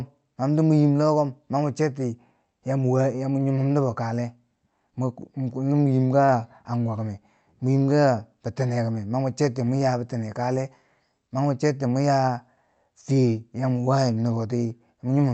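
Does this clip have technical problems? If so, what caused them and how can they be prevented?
Yes. A short stall from a late packet occurs at 6.25 to 6.31 s. The next packet was not there when due, so the jitter buffer ran dry and the receiver held the last sound for about 29 ms before resuming where it stopped. Nothing is lost, but the sound drags briefly and adds 29 ms of delay. A slightly deeper or more adaptive jitter buffer, and a network path with less delay variation, would absorb this.

Lost packets rebuilt from error correction occur at 6.28 to 6.34 s, overlapping the stall, and again at 6.95 to 7.01 s. Each covers 60 ms. The packets were lost, but the packets that followed them carried low-bitrate copies through Opus in-band forward error correction. Those copies fill the gaps, so there is no silence, but both stretches sound rougher and grainier than the surrounding speech. 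Reducing packet loss on the link, for example with a wired connection or less congestion, prevents this, and keeping FEC enabled keeps any remaining losses gap-free.

Elsewhere the audio carries the ordinary coding character of an Opus call with content up to 8 kHz.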